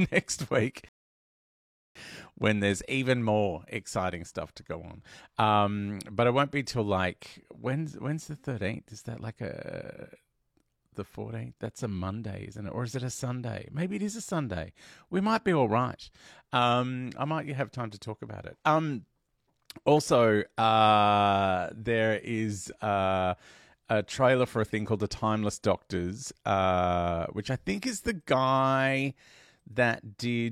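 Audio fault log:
0.89 to 1.96 s, rebuffering stall. The speech cuts to dead silence less than a second in and stays silent for about 1.07 s. It then picks up at exactly the point where it broke off, with nothing skipped or repeated. The player has used up its downloaded audio and must wait for more data before it can continue. No audio is lost, but the gap adds just over a second to the playback time.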